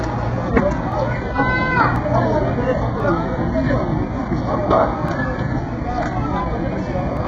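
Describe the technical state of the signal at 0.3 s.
At 0.3 s the treble is synthetic and gritty, stopping at 7.9 kHz. This is likely HE-AAC compression, rebuilding the top end from lower bands, heavily damaged, pointing to a very low bitrate.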